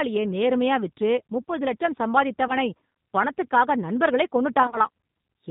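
A speech recording carries the G.729 codec throughout, and the damage is plainly audible: the voice sounds slightly rough and synthetic, with the rebuilt quality of a low-rate codec, which fits 8 kbit/s G.729A. This happens because the codec models the voice with a vocal tract filter, a pitch predictor and a few pulses per frame rather than sending the waveform. On a spectrogram, energy stops cleanly at 4 kHz, and harmonics look smeared and less crisp than in a wideband recording. VoIP packet loss concealed by the speech codec appears twice. The first is a brief dropout from 2.48 to 2.53 s, where about 10 ms of audio is missing. The second is worse, from 4.63 to 4.81 s, where about 50 ms is lost in pieces spread over roughly 100 ms, the longest single gap being 30 ms, which points to several lost frames. In both places the decoder keeps extending its last pitch and filter at falling gain, so the sound turns into a fading buzzy tone or coloured noise, and it stays weak or distorted for a while after real audio resumes. 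On a spectrogram this shows as flat, repeated harmonic bands that dim. On the waveform it shows as a sagging, overly regular stretch instead of a silent gap.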